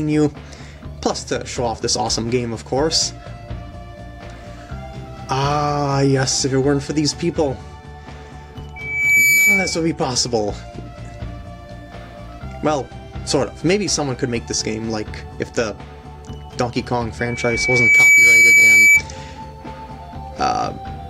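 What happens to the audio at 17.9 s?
A microphone is picking up the loudspeaker it feeds, and the loop gain passes one at 2.3 kHz, causing loudspeaker feedback squeal from 17.19 to 19.03 s. The tone swells over roughly a second into a piercing squeal, ending up about 15 dB above the program audio.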